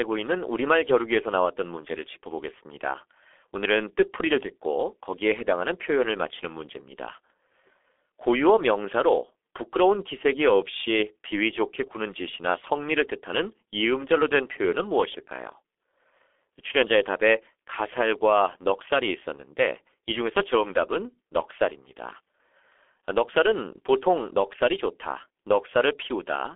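Speech squeezed through the G.723.1 codec from start to finish: nothing above about 3.7 kHz, a telephone band of roughly 300 Hz to 3.5 kHz, and heavy coding damage. The dull, hoarse tone and smeared consonants fit a bitrate around 6.3 kbit/s.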